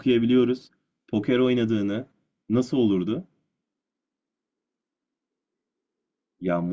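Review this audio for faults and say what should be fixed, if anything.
No faults can be heard in this speech recording. Nothing needs to be fixed.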